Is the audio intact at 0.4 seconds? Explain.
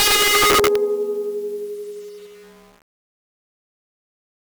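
No. Integer overflow from 0 to 0.76 s: music driven about 13 dB over full scale wraps to the opposite sign, giving violent cracks, with full-range waveform flips and broadband spectrogram streaks.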